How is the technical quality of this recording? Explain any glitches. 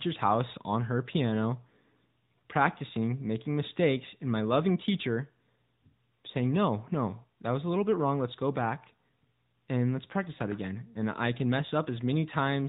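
The recording has audible narrowband mobile codec damage throughout. The speech passed through the AMR narrowband mobile codec. Sampling at 8 kHz cuts everything above 4 kHz, and coding the voice with a vocal tract model leaves speech dull, buzzy and synthetic, consistent with a mid-rate mode around 10 kbps.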